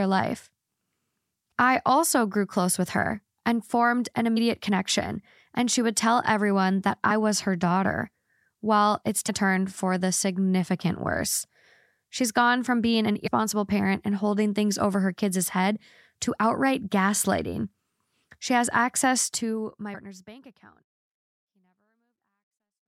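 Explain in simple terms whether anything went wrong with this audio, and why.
The speech briefly lurches forward five times, at 4.36, 7.09, 9.28, 13.26 and 19.93 seconds. At 7.09 it falls between "would tell everyone that" and "was her daughter," and at 19.93 between "has access to my" and "bank account." These are compressed frames skipped. The file stores sound in 24 ms chunks, and a few of them were missing or rejected as damaged. Playback jumped ahead by roughly 70 milliseconds to a third of a second. The gentle fade-out from about 19 seconds is a normal edit, not a fault.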